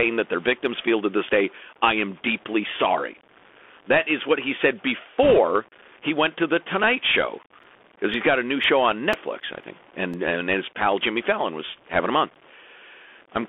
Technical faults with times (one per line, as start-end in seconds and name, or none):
0.00-13.48 low bit depth without dither
0.00-13.48 Bluetooth CVSD headset codec
5.23-5.38 bit errors on a Bluetooth voice link
7.63-10.14 periodic USB or driver dropouts